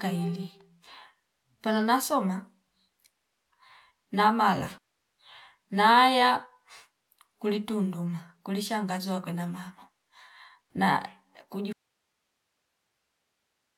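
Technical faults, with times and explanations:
11.73 s to the end: audio dropout to a faint residue. Speech cuts off abruptly into faint hiss, likely a lost input while the path stayed live.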